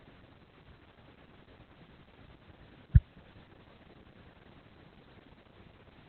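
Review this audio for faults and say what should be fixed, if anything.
Throughout the speech, the sound is muffled, hoarse and faintly robotic, with nothing above 4.3 kHz. This is heavy Opus voice compression, whose narrowband SILK coding points to roughly 8 kbps. Prevent it by encoding at a higher Opus bitrate so the full voice band is kept.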